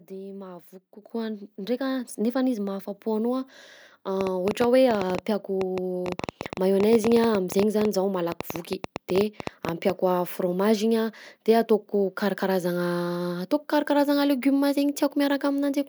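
At 1.02 s the microphone volume steps up by about 8 dB in one jump as the input level is raised, lifting speech and background together. The waveform envelope widens abruptly there.

From 4.21 s to 9.91 s a train of clicks ticks over speech and pauses, around fifty irregular pops at roughly 9.5 per second, peaking about 15 dB above the signal. The likely cause is interference. On a spectrogram they show as thin vertical broadband lines.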